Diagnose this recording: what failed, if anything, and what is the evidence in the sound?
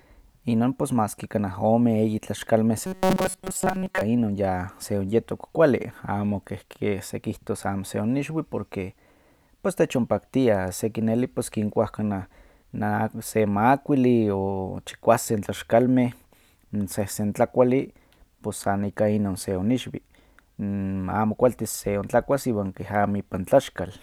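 Between 2.87 and 4.01 s the speech collapses into a rigid, metallic buzz at a fixed 188 Hz that still loosely tracks the syllables. This is the robotic sound from repeated short buffers, likely a driver or buffer underrun: fresh audio arrived too slowly, so the same tiny block was replayed while real audio was dropped. A 188 Hz buzz fits a block of about 5.3 ms, and the repeats fill most of that stretch.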